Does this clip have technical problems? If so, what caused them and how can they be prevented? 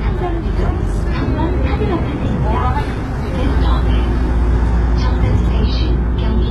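Yes. Throughout the sound, the treble sounds synthetic and gritty, with nothing above about 11.8 kHz. This points to heavy HE-AAC compression at a low bitrate, around 16 kbps. The likely cause is spectral band replication rebuilding the upper band from copied lower bands, so its harmonics misalign. Encoding at a higher bitrate with plain AAC would prevent this.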